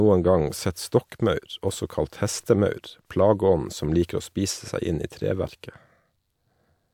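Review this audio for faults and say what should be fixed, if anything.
Nothing needs fixing, as the speech signal shows no audible technical faults at any point.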